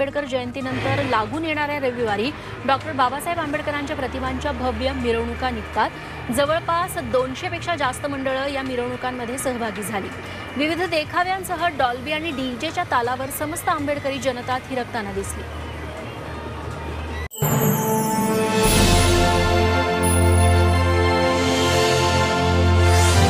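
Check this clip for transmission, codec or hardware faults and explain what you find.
Nothing stands out here, so there's nothing to flag from the transmission, codec or hardware side.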